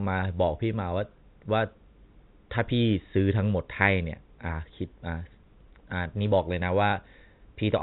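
Right near the end, from 6.90 to 6.92 s, there's a brief hiccup from packet loss with the last packet repeated. About 20 ms of audio went missing, roughly one packet's worth, and the receiver filled the hole by replaying the previous chunk. That single replay comes through as a small blip. Everything underneath runs through G.711 telephone coding, so it all sits below 4 kHz.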